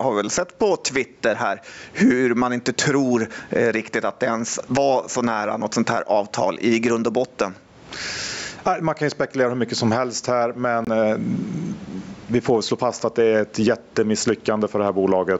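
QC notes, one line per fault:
Throughout, gain pumping: the level is pulled down under each loud syllable, a swing of around 20 dB, likely from input gain set far too high into a fast limiter. Unlike a noise gate, the background never cuts to silence.
10.85–10.88 s, Bluetooth dropout: just after "mycket som helst här", the sound stops for about 31 ms, then resumes further along as if it had played on. This fits one lost packet of about 23 ms of audio. Unlike a click or stutter, nothing repeats.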